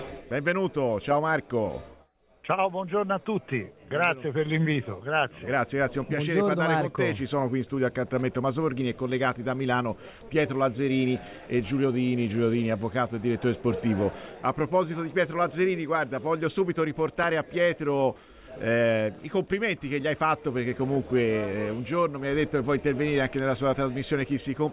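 Nothing stood out on listening to the audio.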